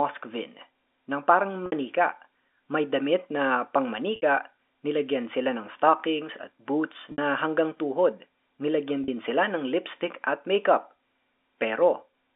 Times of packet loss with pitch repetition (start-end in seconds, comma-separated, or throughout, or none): 1.66-1.72, 4.16-4.22, 7.12-7.18, 9.04-9.08